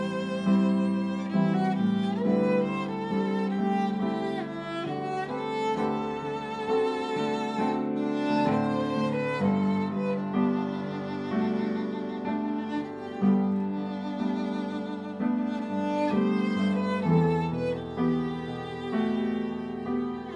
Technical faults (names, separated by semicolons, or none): none